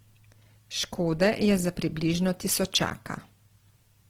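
Throughout the speech, Opus compression is plainly audible: bandwidth stays wide, reaching about 20.3 kHz, yet the sound turns grainy and rough rather than swirly. Starved bands get filled with noise or folded content, not left empty as MP3 would, which fits likely music-mode encoding near 16 kbps.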